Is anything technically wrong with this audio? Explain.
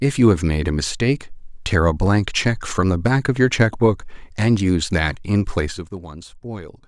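Yes. From 5.59 to 5.97 s, zipper noise: the level falls about 15 dB in unsmoothed 2 dB steps, roughly thirty per second, each clicking, producing audible ticking.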